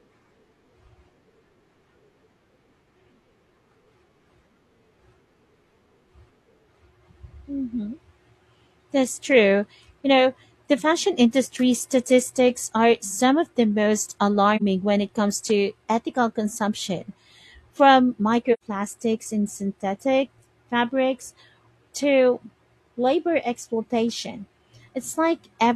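Speech with AAC frame loss with muting: soft-edged gaps at 14.56 s (about 43 ms, fitting one lost frame) and 18.53 s (about 85 ms, fitting two). The decoder zeroed the missing spectrum, so overlapping windows fade sound out and back in, unlike a hard dropout's abrupt edges.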